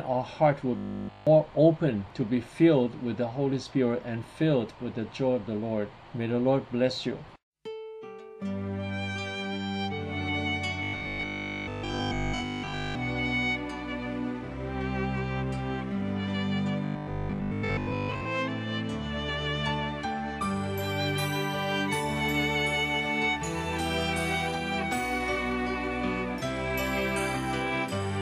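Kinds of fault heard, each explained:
Robotic sound from repeated short buffers: at 0.77, 10.83 and 16.85 s the sound turns rigid and metallic with a fixed 50 Hz buzz, likely from late audio covered by looping the last 20 ms; the first stretch is nearly all loop, the others mostly.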